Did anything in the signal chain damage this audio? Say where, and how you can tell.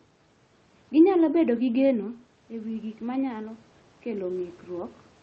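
Yes. The call processing's automatic gain rising fault runs from 1.46 s to 4.99 s. When the talker moved away around 1.5 s, the input dropped by about 9 dB, and the gain control slowly added about 5 dB, so voice and room noise swell together.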